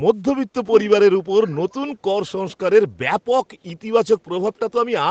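From 1.42 to 1.74 s a faint, delayed copy of the speech trails behind it, lagging by about 368 ms and sitting far below the main level. This is an echo leak, likely caused by a far-end loudspeaker feeding its microphone, with the echo canceller letting a residue slip back through the band-limited call path, which tops out near 8 kHz.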